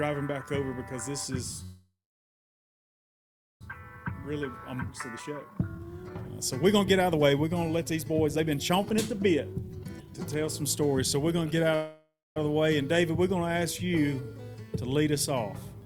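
The audio has two call audio freezes, a long jitter buffer speed-up, and a skip ahead inside that speed-up. The first call audio freeze runs from 1.63 to 3.63 s. The last sound is stretched into a short decaying buzz, then about 1.67 s of silence before playback resumes exactly where it stopped. Nothing is lost, but the stream is now roughly 2.0 s later than before. The likely cause is delayed packets draining the jitter buffer. The second freeze, from 11.75 to 12.38 s, works the same way on a smaller scale: 0.61 s is inserted, including about 0.22 s of silence, and again no audio is missing. Between these, from 3.83 to 11.64 s, the receiver works off the built-up delay with a jitter buffer speed-up. It repeatedly cuts out pitch-period-length pieces, so the sound runs at 117% speed with unchanged pitch and feels hurried. Across the stretch it removes about one and a half seconds. At 4.87 to 4.90 s there is a skip ahead: roughly 0.7 s of audio is dropped, and the material on either side is joined with only a 9 ms fill. 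The result is an abrupt forward jump rather than a gap.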